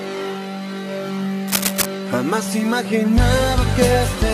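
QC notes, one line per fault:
1.48–1.86 s, cable scratch noise: a dense, uneven burst of scratching rustle sits over the sound at roughly its own level, likely from a worn cable or connector shifting and rapidly changing its contact resistance. Unlike separate clicks, it forms a dense ragged patch.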